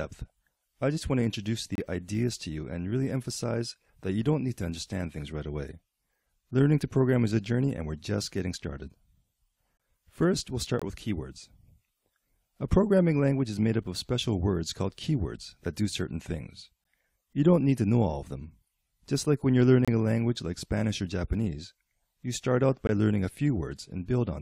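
Gaps between stream segments occur at 1.75–1.78, 7.77, 9.77–9.80, 10.79–10.82, 13.84, 16.84, 19.85–19.88 and 22.87 s. They fall on a one-second segment grid, where adjacent segments' timestamps don't quite meet and the player pads the shortfall with silence. Each is a hard-edged dropout lasting between 4.4 and 27.9 ms, briefly halting the sound before it resumes. Nothing is cut from the audio; silence is inserted.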